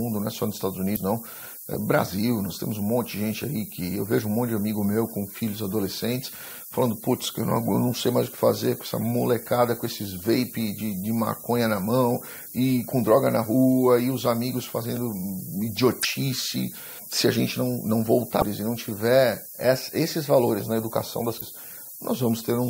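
The whole clip has been reduced to very few bits, a resolution that points to roughly 6-bit samples, with noise shaping feeding the rounding error back so it lands high in the band. The result is low bit depth with noise shaping: a constant, thin hiss sitting only around 10 dB under the sound and climbing steeply toward the top of the spectrum.

On top of that, damaged data in the compressed stream makes the decoder misread frames, lose sync and hunt for the next valid header. Each time, it produces a short chirp, squawk, click or short hole lasting about 40 to 50 ms. This happens at 0.93 to 0.97 s, 16.00 to 16.05 s, 18.37 to 18.43 s and 21.37 to 21.43 s, briefly breaking the flow of the audio each time.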